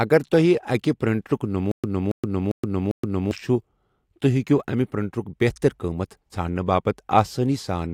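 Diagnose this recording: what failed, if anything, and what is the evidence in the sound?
Between 1.71 and 3.31 s there's a stutter with silent gaps. One 276 ms burst repeats four times, each followed by 124 ms of digital silence, in a 399 ms cycle. It's likely a stalled playback buffer replaying its last fragment on each retry, so the real audio there is lost.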